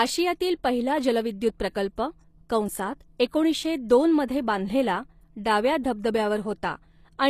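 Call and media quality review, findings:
Gritty, lispy s sounds and synthetic-bright treble throughout, nothing above 14.9 kHz. Likely HE-AAC compression at a low bitrate, around 24 kbps; replicated upper bands misalign with the coded lows.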